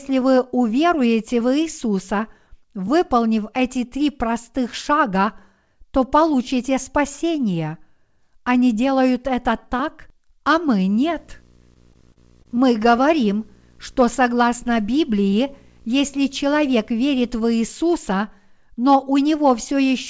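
Just after "это так а мы", from 10.94 to 17.64 s, a steady buzz at the 59.94 Hz field rate comes in with hash above it, roughly 30 dB below the speech. This is video or display buzz: a screen or video cable is coupling its scan signals into the audio.

Within that stretch, from 11.74 to 13.05 s, the speech catches and drags in a series of brief stutters, the longest about 30 ms. These are repeated stalls: packets arrived late, the jitter buffer kept running dry, and the receiver stretched the last sound to bridge each wait, so nothing is lost but the timing limps.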